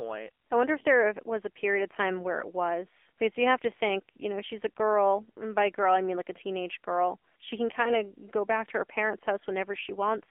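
AMR narrowband mobile codec, throughout: the sound is squeezed into a telephone band of roughly 300 Hz to 3.5 kHz, and the plainly audible buzzy, synthetic coloration fits a low rate around 7.4 kbps, where too few bits drive the vocal-tract model.

AMR bit errors, 7.84 to 8.04 s: for about a fifth of a second, which points to roughly five damaged 20 ms frames, flipped bits at a rate of a few percent misplace the excitation pulses and skew the finer parameters, so the speech keeps its pitch and level but turns hoarse, scratchy and gargly.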